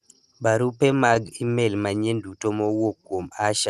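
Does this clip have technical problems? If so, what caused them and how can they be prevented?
Yes. From 0.91 to 1.57 s, just before "manyien duto", there are repeated stalls (stutter): seven brief dropouts, the longest 17 ms, where packets arrived late and the receiver stretched the last sound to cover them. Nothing is lost, but it drags. A steadier network path or a slightly deeper jitter buffer would prevent this.

Then from 2.61 to 3.17 s, right after "manyien duto", there's a jitter buffer slow-down: the buffer repeated pitch periods to rebuild its reserve, so the audio runs at about 90% speed, adding 63 ms at unchanged pitch. Keeping the buffer target stable, rather than raising it mid-talk, avoids this.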